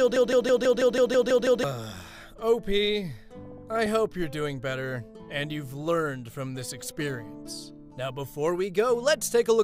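From the very start until 1.64 s the audio is caught in a broken-record loop, already running as it begins: a 163 ms fragment repeats nine times back to back, likely from a stalled player or stream resending its last fragment. The waveform shows identical blocks, and the spectrogram shows a striped pattern.

From 3.36 to 3.86 s comes DAB burbling, short blips of noise over the sound. Bit errors at a rate of a fraction of a percent slipped past error correction, corrupting samples in individual sub-bands. The spectrogram shows scattered short rectangular patches flaring in separate frequency bands, consistent with around 25 corrupted MP2 frames.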